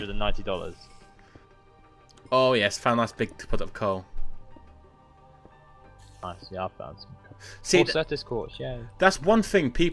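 No dropouts, clicks, distortion or level jumps turn up anywhere in the clip.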